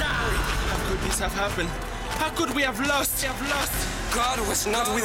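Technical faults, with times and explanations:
3.23 s to the end, doubled audio track: from 3.23 s a second, full-band copy of the sound runs about 0.7 s behind the original, a few dB quieter, and continues to the end. It most likely comes from the audio being captured twice through a slower path, or from an edit leaving two copies out of step. Unlike an echo or reverb, the copy has no decay or room colour and appears abruptly rather than building up.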